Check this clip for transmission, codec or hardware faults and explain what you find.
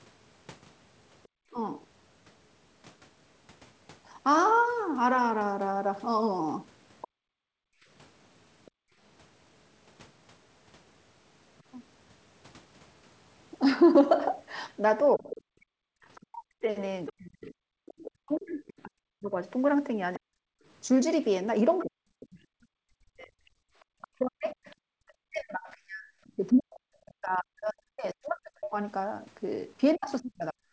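Yes, the speech shows echo-control faults; the band stopping at 8 kHz fits a G.722 call path working normally.

Other side's voice leaking through: at 1.23–1.28, 7.01–11.63, 15.31–17.13 and 21.79–24.75 s, faint foreign speech about 15–35 dB down. The likely cause is residual loudspeaker echo, visible as weak extra harmonics on a spectrogram.

Speech suppressed in double talk: at 1.51–1.57 s and from 15.16 s to the end, speech dips up to about 40 dB. The canceller probably confused the talker with echo; the waveform shows notched envelopes.

Background gated by the echo canceller: room sound drops about 35 dB during 7.08–8.98 s and 33 dB during 23.68–23.90 s. The microphone is clamped during playback, appearing as blank spectrogram gaps.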